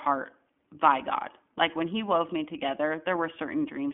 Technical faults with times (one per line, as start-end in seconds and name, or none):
0.00-3.93 iLBC codec